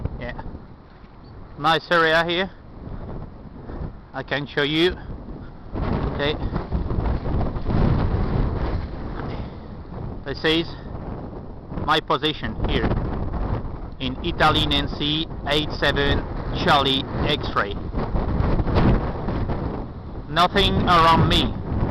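Nothing stood out as a technical problem on listening to the recording.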